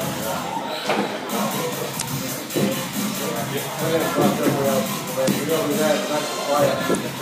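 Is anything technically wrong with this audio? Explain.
Yes. There is damaged data in a compressed stream, heard three times: 1.98 to 2.02 s, 5.24 to 5.28 s, and 6.91 to 6.96 s. Each lasts about 44 ms. At those points the encoded data has been corrupted. The decoder reads bad frames or rejects them. It loses its place and hunts for the next valid frame header. Each event sounds like a short chirp, squawk, click or hole breaking through the sound.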